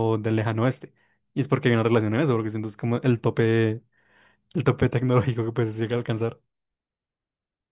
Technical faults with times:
none

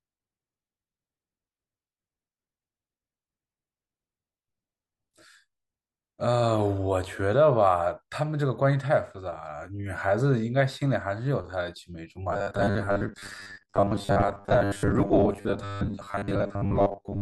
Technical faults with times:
12.33-17.21 robotic sound from repeated short buffers

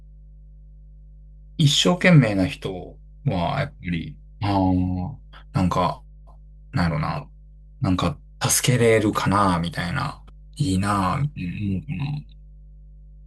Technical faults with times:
0.00-13.26 mains hum

